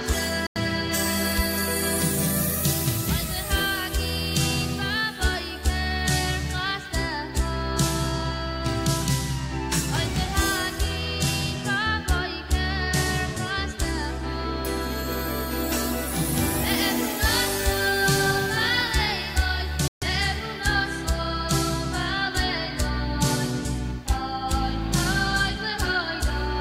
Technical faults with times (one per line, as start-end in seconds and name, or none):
0.47-0.58 Bluetooth dropout
19.88-20.04 Bluetooth dropout